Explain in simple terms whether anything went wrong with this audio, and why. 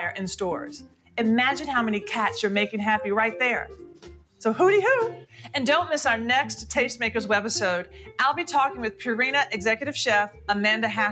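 A noise suppressor applied to music or sounds runs through the whole clip. This filter was built to clean up voices on calls, but here it mistakes steady tones, room ambience and echo for background hiss and keeps turning them down. Sharp attacks slip through, while held sounds and their fading tails get pushed lower, so the level pumps up and down instead of staying even. The effect is constant.

Sound cut by the noise suppressor is most obvious in two short patches, from 0.79 to 1.17 seconds and from 3.73 to 4.41 seconds. Each lasts around half a second. In both, the filter judged what was playing to be unwanted noise and dipped it far more than elsewhere, so the sound suddenly thins out and sinks, then recovers. Lingering or fading parts lose the most.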